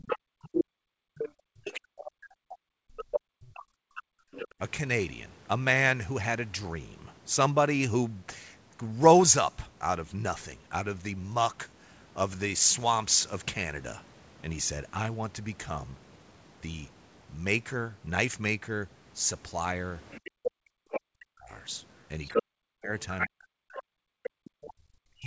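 Other side's voice leaking through, from 0 to 1.76 s: a second voice sits in the recording at roughly the talker's own level. The likely cause is the far end playing on the loudspeaker and reaching the microphone without being fully cancelled. Speech suppressed in double talk runs from 0.15 to 4.6 s: with both voices present, the talker's level falls away in pieces, by as much as about 40 dB, for around three seconds in total. The likely cause is an echo canceller that could not separate the two and turned everything down. Within that span the leaked voice returns at 2.97 to 3.2 s at a similar level, and at 4.32 to 4.54 s, about 10 dB quieter.

Leakage comes back from 20.11 to 21.01 s, a few decibels under the talker. From 20.31 s to the end of the clip, speech suppressed in double talk again cuts into the talker, with dips of around 40 dB. Meanwhile the other side's voice is clearly heard from 22.27 to 24.73 s at roughly equal loudness.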